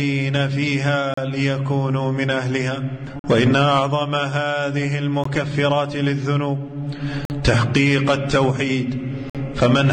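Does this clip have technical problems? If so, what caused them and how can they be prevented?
Yes. Gaps between stream segments: mismatched timestamps between 2-second segments left holes the player filled with hard-edged silence at 1.14–1.17 s, 3.19–3.24 s, 5.24 s, 7.25–7.30 s and 9.30–9.35 s (17–51 ms). Making each segment's start timestamp match the previous segment's end prevents this.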